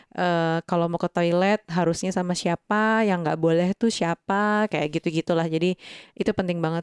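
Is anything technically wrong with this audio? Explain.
No, nothing technically wrong can be heard here.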